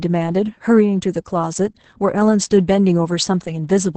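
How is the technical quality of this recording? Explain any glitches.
Quality is poor throughout. Opus voice compression affects the whole clip. Coarse SILK linear-prediction coding, pointing to about 10 kbps, leaves speech muffled, hoarse and slightly robotic, with nothing above 8.7 kHz.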